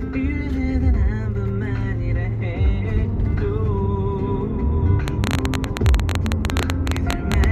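From 5.08 s to 7.45 s a train of clicks runs over the sound: a stream of short, near-identical pulses arriving at an uneven pace, averaging 14.4 per second, some forty in all. Each click stands roughly 20 dB above the underlying audio. The cause is likely an external pulse source, such as electrical interference from nearby equipment or a faulty connection or power supply, injecting spikes into the signal path.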